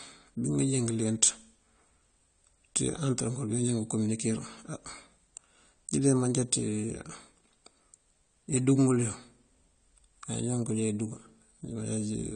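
A speech recording carries AAC compression damage across its whole length. The top of the spectrum is cut away, so the sound is dull. The codec artefacts are plainly audible, which tells it apart from a simple low-pass filter: a filter would only darken the sound, but here the quantised spectrum itself is audibly degraded. The likely cause is AAC-LC encoding at a low bitrate, fitting roughly 32 kbps, where the encoder lowers its cut-off and spends too few bits on what remains.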